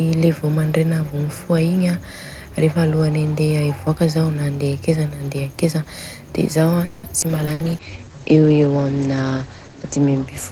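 At 5.50 to 5.56 s a very faint delayed copy of the speech appears, about 483 ms behind the original: an echo leak, likely from a far-end loudspeaker whose echo canceller let residue through.

From 6.85 to 7.06 s a call audio freeze fills about 180 ms with a sustained, fading continuation of the last sound. The likely cause is held-up packets draining the jitter buffer. Speech then resumes where it stopped, with nothing lost.

At 7.21 s a skip ahead drops roughly 70 ms, joining the two sides of the jump almost directly.

From 7.3 s to the end a call bitrate drop takes the encoder from 48 to 12 kbps for about 2.2 s at its lowest. Audio bandwidth narrows from 20 kHz to 8 kHz, and the sound turns muffled and coarse.

At 7.46 s a second skip ahead removes another roughly 70 ms.

From 7.53 to 7.62 s a burst of packet loss leaves 60 ms missing. It is covered by a fading buzz or hiss before the speech picks up further on.

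From 7.64 to 8.41 s a jitter buffer slow-down repeats pitch periods to add 106 ms. Speech runs at 87% speed with unchanged pitch, drawn out.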